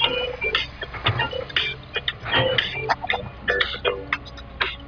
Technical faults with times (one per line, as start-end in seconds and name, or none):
none